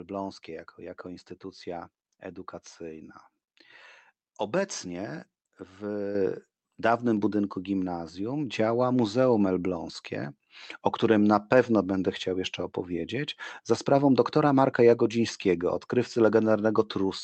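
A speech recording with a microphone volume stepped up at 6.15 s: the input gain rises by about 6 dB in a single jump, so voice and background noise get louder together. On a waveform the envelope widens abruptly there, and a spectrogram shows every band brightening at once. The audio also passed through an Opus call path, whose content stops near 8 kHz.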